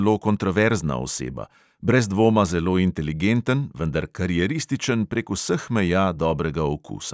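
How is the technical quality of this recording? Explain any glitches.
No technical faults can be heard anywhere in the recording: the speech signal stays continuous and intact throughout, with no glitches to explain.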